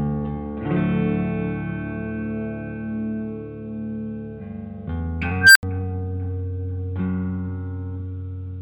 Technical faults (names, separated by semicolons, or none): unstable filter